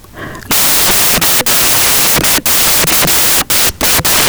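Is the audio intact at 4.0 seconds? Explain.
No. At 4.0 seconds, as across the whole clip, the samples are built from the wrong bytes: each value is assembled in the wrong byte order or alignment, so the fast-changing low bits dominate. The speech comes with loud, harsh broadband noise, close to white on loud sounds.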